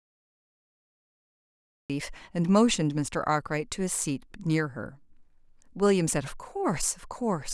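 A speech clip with a cut-off start: digital silence runs until 1.90 s, where sound begins mid-utterance without any natural attack, a hard vertical edge on the waveform and spectrogram, because capture began late.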